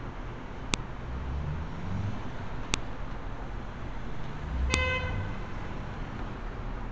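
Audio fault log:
0.74 s, 2.74 s, 4.74 s: file header played as audio. Header bytes at the start of each 2-second piece play as samples, giving sharp snaps that show as lone waveform spikes and thin full-band vertical spectrogram lines.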